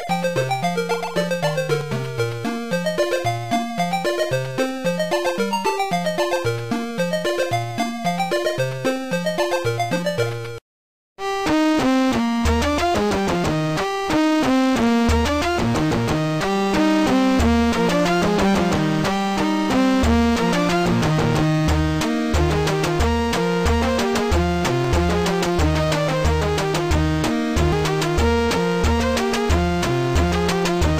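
A likely dropped buffer (overrun), where samples were overwritten before being read, removes around 50 ms of audio at 1.81 s, 24.85 s and 27.73 s. Each time the sound jumps ahead with no silence.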